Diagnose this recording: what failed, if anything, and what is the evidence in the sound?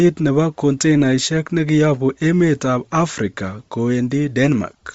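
Codec stage: the speech carries a breathy, grainy upper band throughout, likely Bluetooth LC3 compression at a low bitrate, around 32 kbps, zeroing high spectrum and noise-filling it.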